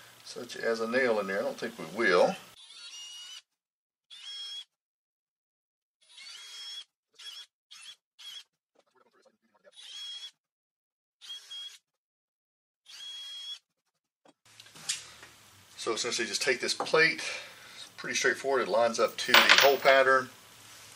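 Nothing stood out as a technical fault anywhere in the recording on listening.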